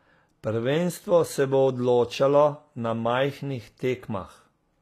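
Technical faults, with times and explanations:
Throughout, HE-AAC compression: the speech keeps a bright top end, but its s sounds come across gritty and metallic, with the codec damage plainly audible and nothing above 14.9 kHz. That points to a likely HE-AAC encode at a low rate, around 24 kbps, where the treble is rebuilt from copied lower bands rather than coded. Unlike a plain low-pass or narrowband codec, the high end isn't dull or missing. It is present but synthetic, with harmonics that don't line up.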